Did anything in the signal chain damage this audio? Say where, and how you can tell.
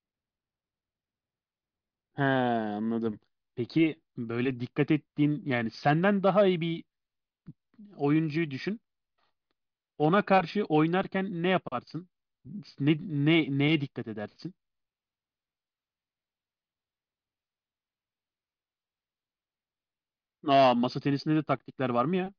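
No, nothing in the chain audibly damaged this speech.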